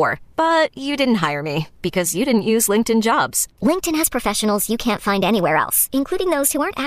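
At 3.67 s the speech jumps into a section at the wrong speed, and it stays there until the end. From that point the audio runs about 1.16 times faster than it was recorded. Pitch rises with the speed, by roughly three semitones. Voices sound higher, thinner and hurried. The change is sudden, not gradual. The likely cause is that this part was played or resampled against the wrong clock rate.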